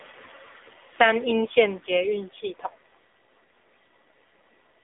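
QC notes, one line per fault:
Throughout: AMR narrowband mobile codec, with nothing above 3.7 kHz, so the spectrogram shows a hard ceiling. The 7.4 kbps rate gives clearly buzzy, synthetic speech.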